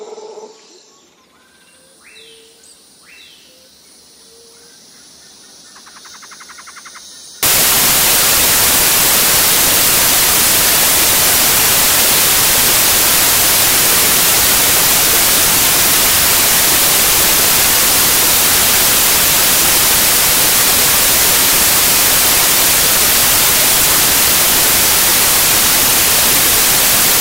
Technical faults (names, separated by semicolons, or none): samples built from the wrong bytes